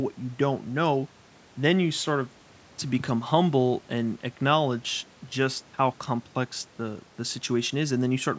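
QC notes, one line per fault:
No faults found in the clip. The speech carries the normal call microphone band with nothing above 8 kHz, and the room noise sits about 32 dB below it.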